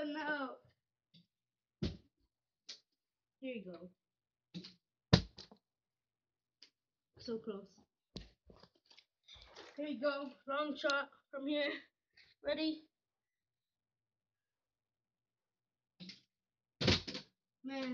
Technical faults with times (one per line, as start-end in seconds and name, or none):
8.56 block of digital silence